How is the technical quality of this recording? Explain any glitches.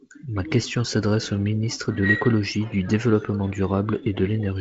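No glitches to report: the speech carries the wideband telephone signature of G.722 coding, band-limited near 7.7 kHz, with the light coding noise that points to the 48 kbit/s mode.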